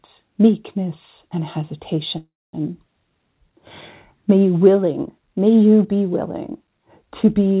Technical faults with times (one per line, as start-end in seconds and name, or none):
2.18-2.55 call audio freeze